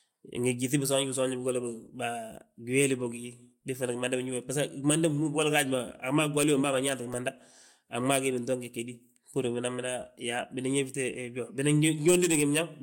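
Nothing stood out on listening to this speech recording; no technical problem could be heard at any point.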